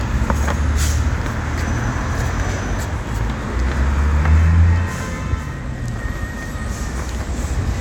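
Nothing in this bit of everyday sound trips up the ear, so there's no technical fault to point to anywhere along the way.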